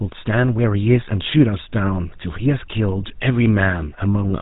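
From start to finish the speech carries a buzzy, gravelly roughness, and everything above about 3.8 kHz is gone, leaving it dull and boxy. This is the GSM full-rate codec at work, with damage that is plainly audible. It rebuilds the voice from a vocal-tract model excited by evenly spaced pulses, keeping only a third of the excitation detail, which produces that rasp. The thin, coarse quality fits a 13 kbps GSM full-rate channel.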